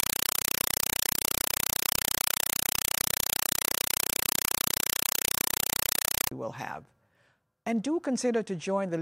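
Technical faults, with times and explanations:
0.00–6.32 s, compressed stream played as audio. Very loud, chattering static takes the place of the sound. A coded bitstream is being passed along as ordinary samples and never decoded. Each frame of data arrives as a 4 ms burst of noise, followed by silence. The bursts repeat 31.25 times a second, which gives the rapid chatter. That frame rate fits an AC-3 stream, and the burst length points to about 192 kbps.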